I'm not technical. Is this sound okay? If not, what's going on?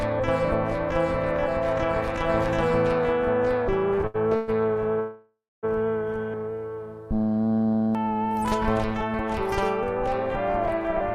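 No. Between 3.95 and 4.50 s there are repeated stalls, a stutter. The sound stops and restarts four times, the longest pause about 0.12 s. Parts of the call data arrived late, so the receiver kept stretching the last sound until it caught up. Nothing is lost, but it drags.

At 5.00 s there is a call audio freeze lasting until 5.65 s. The sound hangs on a fading buzz or hiss, and the final 0.22 s is silent. Then it resumes where it stopped. The likely cause is data held up on the network.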